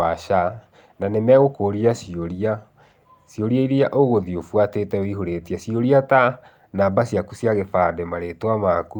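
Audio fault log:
No technical faults can be heard anywhere in this speech recording; the signal holds steady and continuous throughout.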